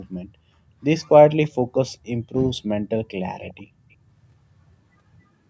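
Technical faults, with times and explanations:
3.41–3.63 s, echo leak: a faint copy of the speech returns 279 ms late, roughly 20 dB below it, likely from a far-end loudspeaker whose echo canceller let some of its microphone pickup through. Unlike room reverberation, it is one distinct, delayed repeat rather than a continuous smear.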